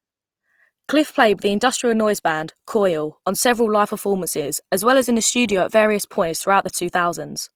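Throughout, Opus compression in CELT mode is likely starved of bits at a rate fitting 24 kbps, leaving the full-band speech plainly grainy, rough and noisy.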